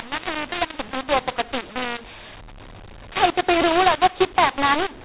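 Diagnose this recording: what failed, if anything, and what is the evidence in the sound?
The decoder read the stream with the wrong G.711 law: the speech was encoded as A-law but expanded as mu-law. This mu-law and A-law mix-up is a codec-stage fault. Every 8-bit code maps to the wrong amplitude, so levels come out scrambled throughout the clip. Some peaks swell and others shrink, producing harsh, gritty distortion over the telephone-band speech, which still stops at 4 kHz. The quietest samples are pushed well above silence, so the pauses fill with noise.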